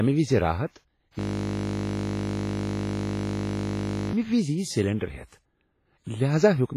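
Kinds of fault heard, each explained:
WMA compression: The audio sounds heavily washy and ringing throughout, with hiss that swells and fades along with the speech and nothing above 15.3 kHz. That is likely a transform codec like WMA smearing quantisation noise across long blocks, which fits a low bitrate around 24 kbps.
System hang loop: From 1.19 to 4.13 s the playback locks up, and one 20 ms slice of audio repeats over and over. A buffer that short turns into a steady buzz at 50 Hz rather than a stutter, running nearly three seconds.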